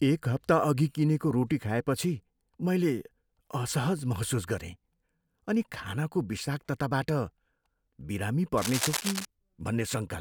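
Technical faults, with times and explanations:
8.57 to 9.25 s, cable scratch noise: for about two thirds of a second a dense, uneven rustle of scratchy bursts sits over the speech, only around 5 dB below it, so it is plainly audible. The likely cause is a worn cable, connector or control being moved, its contact resistance jumping about rapidly. Unlike steady crackle or isolated digital clicks, the bursts cluster irregularly into one short episode, as contact movement would produce.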